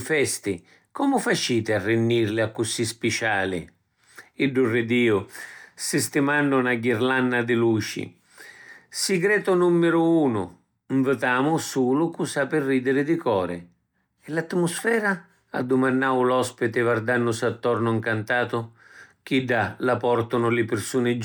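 There are no technical faults to describe in this speech recording.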